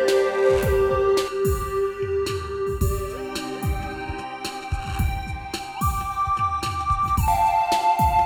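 From 1.28 s to 7.28 s the music takes on channel delay (comb filtering). One channel is running late by under a millisecond, and when the two get folded to mono the shared content cancels at evenly spaced frequencies. The first notch sits somewhere around 700 Hz, with more stacked above it at regular intervals. The result is a hollow, phasey tone that clears up again once the channels line back up.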